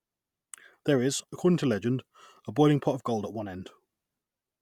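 At 1.20 s, just before "according to legend a", there is a tiny skip forward, as if a sliver of speech about 24 ms long, running to 1.22 s, had dropped out. This is an overlap between stream segments: two neighbouring segments claimed the same stretch of time, and the player trimmed that stretch from audio that was never actually repeated. The waveform jumps across the gap.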